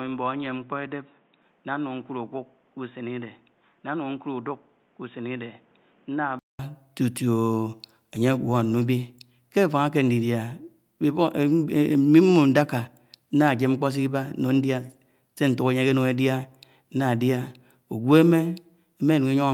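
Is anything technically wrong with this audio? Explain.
Yes. From the start to 6.59 s, the speech is band-limited to 3.8 kHz. It sounds dull and boxy, noticeably quieter, with a faint noise floor. This is likely an input switched to a poorer device. A 0.2 s silence marks the switch back.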